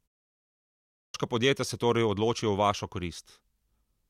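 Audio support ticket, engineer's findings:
Clipped start after a pause at 0.78 s: speech bursts out of silence missing its onset, about 0.36 s swallowed before "podjetja se torej". Output device likely slept through the 0.78 s pause and woke late. Speech itself is lost, unlike a muted pause that drops only background.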